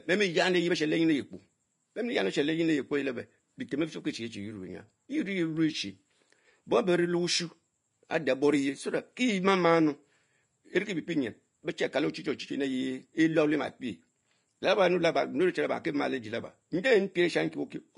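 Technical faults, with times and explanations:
Throughout, Vorbis compression: the speech sounds hissy and grainy, with roughened tones, smeared consonant attacks and nothing above 10.5 kHz. The likely cause is a low-quality Vorbis encode near 33 kbps, whose coarsely quantised treble turns fine detail into noise.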